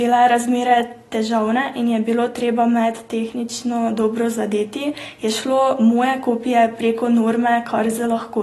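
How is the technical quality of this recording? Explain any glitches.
The technical quality is compromised by audible codec damage throughout the speech. The cause is likely AAC compression, consistent with AAC-LC at around 32 kbps. Nothing is present above 12.1 kHz, and sparse quantisation leaves a dull, smeared, warbling texture on sibilants. A plain low-pass filter would not produce that warble.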